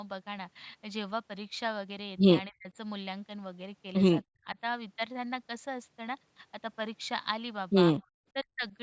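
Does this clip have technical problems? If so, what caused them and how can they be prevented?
Yes, the speech dips out three times, at 2.49–2.75 s, 4.29–4.58 s and 8.33–8.74 s, dropping by roughly 35, 40 and 40 dB. That's likely speech suppressed in double talk, with the echo canceller mistaking the talker for loudspeaker echo and ducking both. A better-tuned echo canceller or a headset would prevent it.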